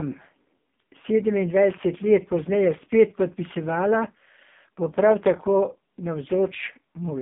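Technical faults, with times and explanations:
Throughout, AMR narrowband mobile codec: nothing passes above 3.7 kHz, and a heavy, buzzy, synthetic texture that plain band-limiting lacks fits AMR-NB's low 5.15 kbps mode.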